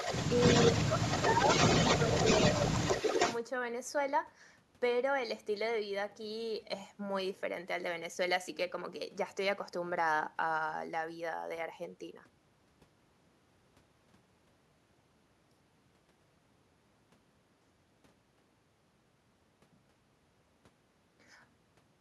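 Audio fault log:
0.00–3.41 s, echo leak: a copy of the speech trails about 313 ms behind at roughly the same loudness, likely from a far-end echo canceller letting loudspeaker pickup through.
0.90–1.15 s, speech suppressed in double talk: the speech dips a few dB for about a fifth of a second, likely the canceller ducking everything while both sides overlapped.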